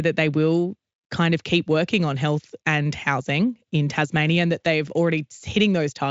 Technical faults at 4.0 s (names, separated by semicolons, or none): none